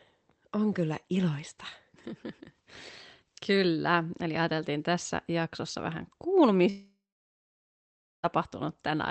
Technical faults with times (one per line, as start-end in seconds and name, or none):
6.69-8.25 long network dropout